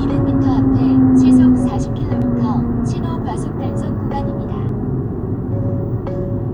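A sound recording that skips abruptly at 2.22 s and 4.69 s, each losing roughly 30 ms; likely audio missing between chunks, dropped while 2.5 s chunks were being joined.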